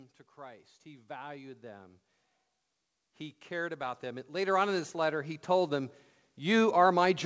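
Speech, heard through a call path whose band stops at 8 kHz, which fits a wideband codec such as G.722. Automatic gain rising occurs twice. From 0.35 to 2.03 s, the level climbs by about 7 dB. From 3.48 to 6.82 s, it climbs again by about 12 dB. Voice and background swell together each time. The gain control judged the input too quiet and raised its gain step by step.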